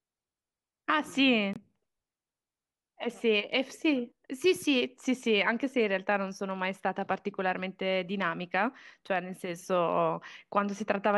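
At 1.53 s the speech drops abruptly into a 44 ms silence, a corrupt frame muted: damaged compressed data was rejected by the decoder and replaced with nothing, which fits two lost frames. The waveform shows a flat gap with sheer edges, the spectrogram a blank vertical stripe, and timing continues unshifted.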